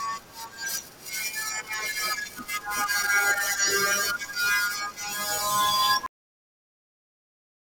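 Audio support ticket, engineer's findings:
Cut-off end at 6.06 s: speech stops mid-sound, drops straight to digital silence, no decay. Final buffers never got written or played out. Check the flush at stream close.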